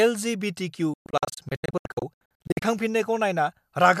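From 0.94 s to 2.62 s the speech breaks up in a digital broadcast dropout. The receiver muted whenever frames failed to decode, punching silent holes of up to 120 ms, 864 ms in all. Each cuts in over 3 ms, and what was missed is lost.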